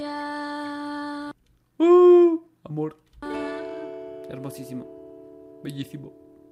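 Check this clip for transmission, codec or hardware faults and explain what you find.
No transmission, codec or hardware faults can be heard here.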